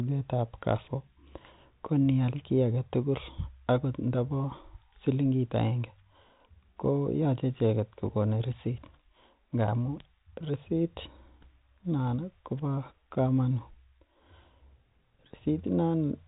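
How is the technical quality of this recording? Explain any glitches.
No glitches can be heard anywhere in this speech recording.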